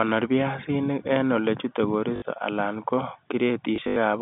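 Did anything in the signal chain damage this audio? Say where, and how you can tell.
Yes, at the network stage: packet loss with last packet repeated. Between "en olechute" and "alan ko", 2.16 to 2.22 s stutters, and 3.76 to 3.96 s breaks into scattered repeats up to 80 ms. Unlike a silent dropout, sound continues, buzzing near 50 Hz, which fits 20 ms packets.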